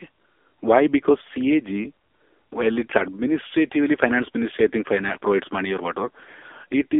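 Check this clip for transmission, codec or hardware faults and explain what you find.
One fault runs through the whole clip: the speech has passed through the AMR narrowband mobile codec (AMR-NB).

From start to finish the audio sits in a telephone band of roughly 300 Hz to 3.5 kHz, with nothing above 3.6 kHz. The codec rebuilds speech from a vocal-tract model excited by sparse pulses, and heavy damage here points to a low mode around 6.7 kbps. This gives a buzzy, synthetic, hollow voice. On a spectrogram, energy stops abruptly at a flat ceiling near 3.6 kHz, with smeared, blocky harmonics beneath.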